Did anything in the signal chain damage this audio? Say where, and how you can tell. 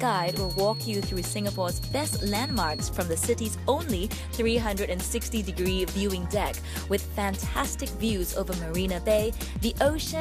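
Yes. From the very start to about 2.92 s there's a feedback whistle: a thin tone at 4.3 kHz that slowly swells and fades, sitting roughly 10 dB under the rest of the sound. It holds one pitch and never grows into a howl. The likely cause is the acoustic loop between a loudspeaker and the microphone running right at the edge of feedback, so that one frequency keeps ringing without quite taking off.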